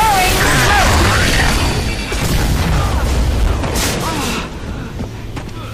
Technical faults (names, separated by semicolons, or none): hard clipping